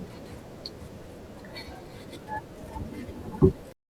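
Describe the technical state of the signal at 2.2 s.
At 2.2 s there is an overlap between stream segments, at the boundary between 2-second segments. The two segments claim the same moment, so the player trims the overlap. About 14 ms of speech is lost. The waveform jumps, giving a brief click or skip.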